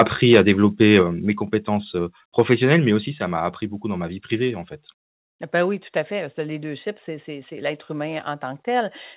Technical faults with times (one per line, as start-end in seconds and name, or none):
0.00-0.03 microphone overload
0.31-0.51 microphone overload
0.81-0.98 microphone overload
1.02 microphone volume stepped down
2.38-2.74 microphone overload
3.06 microphone volume stepped down